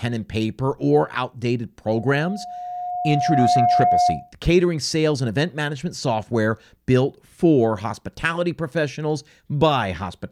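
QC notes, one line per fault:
1.94–4.32 s: loudspeaker feedback squeal. A single tone at 716 Hz swells over roughly a second and a half and ends up about 5 dB above the speech. The microphone is re-amplifying its own loudspeaker, with loop gain above unity at that frequency.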